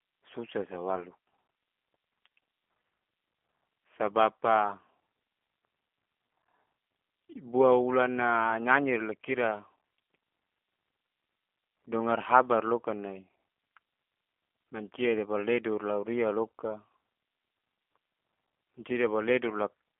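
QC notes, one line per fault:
Throughout, G.729 codec: thin, rough, slightly synthetic speech with nothing above 3.5 kHz, consistent with 8 kbit/s coding that rebuilds speech from a filter and sparse pulses.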